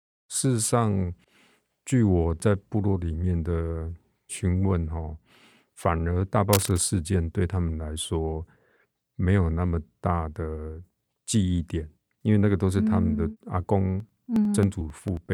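At 6.53 s there's a burst of cable scratch noise running to about 6.83 s, a dense, ragged scratching and rustling laid over the speech and fairly loud, only a little below the voice itself. It's likely a worn cable, connector or control getting moved, so its contact resistance jumps around rapidly and throws that uneven crackle into the signal for roughly a third of a second before it settles.

Then from 14.00 s to 15.26 s you get periodic USB or driver dropouts. Every 0.09 s a little chunk of audio, around 10 ms, simply goes missing and the stream skips ahead, which comes across as a steady run of ticks, something like fifteen of them, riding on the speech. That even spacing points to some background task blocking the bus or driver on a fixed cycle.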